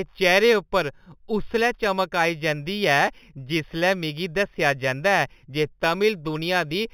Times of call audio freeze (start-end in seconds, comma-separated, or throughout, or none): none